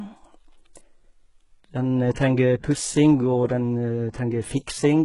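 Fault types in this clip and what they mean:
HE-AAC compression: gritty, lispy treble, likely from HE-AAC rebuilding highs by copying lower bands at a low bitrate; the spectrogram shows blocky, repeated bands ending sharply at 11.1 kHz.
Pre-echo: at 2.14 s, a 16 ms hiss leads a sharp attack as codec noise smears ahead of it; the waveform shows low fuzz just before the onset.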